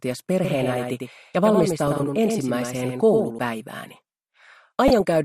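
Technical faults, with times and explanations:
Throughout: MP2 compression. The sound is dull and carries a gurgling, granular grain, which is likely the result of MPEG Layer II coding at a low rate, around 80 kbps. Starved of bits, the coder shuts off upper sub-bands and quantises the rest coarsely. On a spectrogram the top of the spectrum ends at a hard ceiling, with rectangular blocks above it blinking in and out from frame to frame instead of fading smoothly.
0.45 to 3.39 s: doubled audio track. A second full-band copy of the sound runs about a tenth of a second behind the first and roughly 5 dB quieter, giving a flat, slap-like double image with no decay or room colour. Its likely cause is the same signal arriving again by a slower path. It switches on and off abruptly at both ends. The waveform shows every transient repeated at a fixed offset, and a spectrogram shows fine comb striping across the full band.
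1.87 to 2.04 s and 4.88 to 5.01 s: DAB burbling. Both bursts are brief patches of burbling laid over the programme. Bit errors have slipped past the error correction into the MP2 data, corrupting samples so that short blips of noise appear in single sub-bands. Each burst spans several frames, which fits a light error rate well under one percent. A spectrogram shows isolated bright horizontal slabs, each confined to one narrow band, popping up for a few milliseconds.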